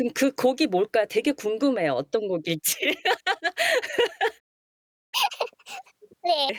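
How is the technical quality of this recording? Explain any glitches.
The recording has two linked playback glitches near the end of the speech.

At 4.39 s the audio cuts out in mid-flow and stays silent until 5.14 s, a gap of about 730 ms. This is a playback stall: the player was likely starved of data or had its output thread blocked, and nothing reached the output until it recovered.

From 5.14 s to 6.49 s the speech runs at 1.5 times normal speed, with pitch raised by around seven semitones, then drops back to normal. This is catch-up at higher speed: the player resamples its backlog faster to win back the time lost in the stall.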